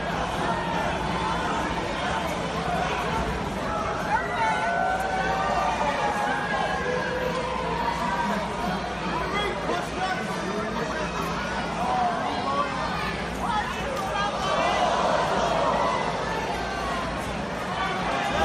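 MP3 compression artefacts run through the whole clip, from start to end, and the damage is plainly audible. The likely cause is an MP3 encode at a low bitrate, around 64 kbps. With so few bits, the encoder cuts off the upper treble and drops quieter frequency components whenever it judges them masked. Those components flicker in and out from frame to frame, which gives the audio a watery, swirling texture and softened, smeared attacks.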